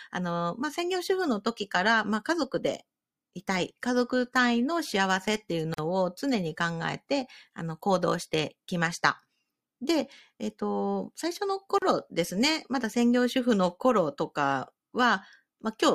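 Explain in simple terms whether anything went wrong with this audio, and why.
Two short dropouts break the speech, at 5.74 s and 11.78 s, lasting about 44 ms and 37 ms. Each is a gap at a join of encoded pieces: six-second sections were encoded separately, and the silent padding each encoder adds was left in when they were joined.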